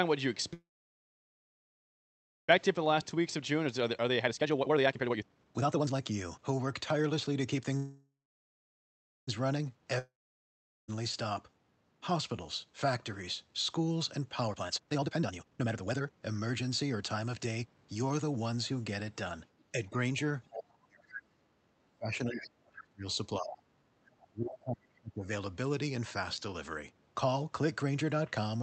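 Speech carried over a call path band-limited to about 8 kHz, with several network and echo-control faults. A call audio freeze occurs at 0.53–2.50 s and again at 7.77–9.29 s. Each time the last sound is stretched into a fading buzz and then silence of about 1.8 s and 1.2 s. Speech resumes exactly where it stopped with nothing lost, likely because packets were held up and the jitter buffer ran dry. Jitter buffer speed-up follows at 2.58–7.72 s and 14.47–18.47 s, where speech runs at about 136% and 139% of normal speed with unchanged pitch and sounds hurried. Trimming pitch-period-sized slices removes roughly two seconds and one and a half seconds to drain the backlog of delay. A long network dropout at 9.99–10.90 s begins as a fading buzz that soon turns to silence, and about 0.9 s of speech is skipped when audio returns, likely because packets never arrived. Speech suppressed in double talk spans 19.72–23.65 s and 24.03–25.30 s, where the talker dips, at worst by about 35 dB. 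This is likely an echo canceller attenuating both voices while the far side speaks. The other side's voice leaking through appears as brief scraps at 20.51–20.62 s, 22.33–22.47 s and 23.51–23.57 s, roughly 10 to 15 dB below the speech. These are likely loudspeaker echo that the canceller failed to remove.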